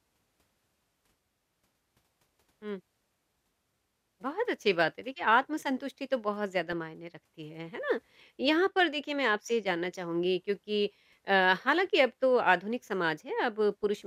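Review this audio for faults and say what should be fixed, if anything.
DAB burbling occurs at 6.72 s and 13.84 s as short bursts of burbling over the speech. Bit errors of a small fraction of a percent got past error correction and corrupted MP2 samples across a few frames, putting short blips of noise in single sub-bands. Improving reception with better antenna placement or a stronger signal would prevent it.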